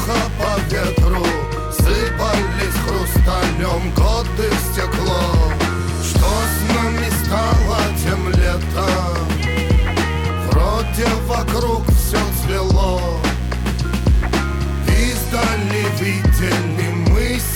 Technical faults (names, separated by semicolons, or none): computer activity noise